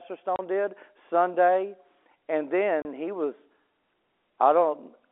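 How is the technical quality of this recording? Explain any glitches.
The recording has two brief dropouts from packet loss filled with silence. The speech sits in a narrow telephone band, which fits G.711 A-law coding.

At 0.36 s and 2.82 s, just before "he was", a 30 ms packet goes missing. Silence replaces it. Each gap has hard edges.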